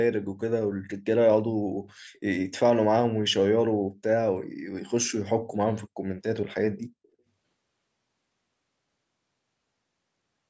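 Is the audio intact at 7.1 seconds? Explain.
No. A brief echo leak runs from 7.03 to 7.08 s. A very faint copy of the sound returns 330 ms late, likely from an echo canceller that missed loudspeaker pickup.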